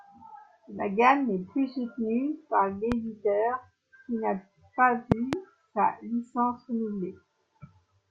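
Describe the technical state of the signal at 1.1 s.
At 1.1 s the speech signal is intact, with no audible fault at that moment.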